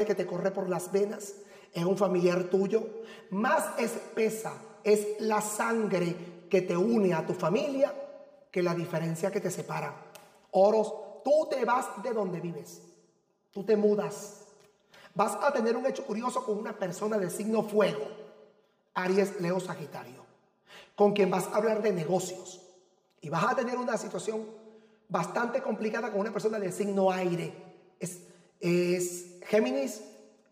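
Channel delay (comb filtering) runs throughout the clip. One channel arrives roughly 5 ms behind the other, and when the two are folded to mono, the content they share cancels at evenly spaced frequencies. The first notch falls at around 100 Hz, with further dips repeating at odd multiples up the spectrum. This fixed comb of notches gives the whole recording a hollow, phasey quality.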